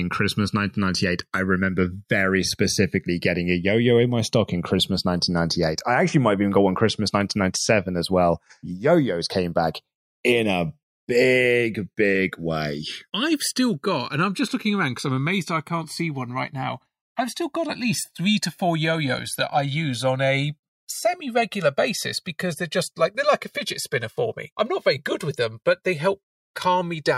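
Throughout the speech, the channels drift apart: separate clocks roughly 100 ppm off let the inter-channel delay creep to about 2 ms, producing slow flanging in mono.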